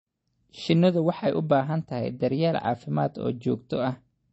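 Speech with plainly audible MP3 compression damage throughout: a watery, swirling quality and nothing above 8.1 kHz, likely from a low bitrate near 32 kbps. A spectrogram would show a hard ceiling at 8.1 kHz and flickering, patchy energy below it.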